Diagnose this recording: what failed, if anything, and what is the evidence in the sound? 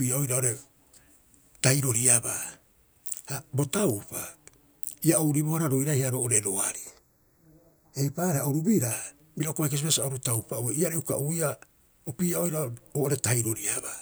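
Channel delay (comb filtering) occurs at mono summing: one channel lags by a fraction of a millisecond, a few samples. From 6.75 to 8.91 s, between "ia ouribohara roiraiha roo'ore" and "bira uka bai", the speech turns hollow and phasey, with fixed notches starting around 3 kHz.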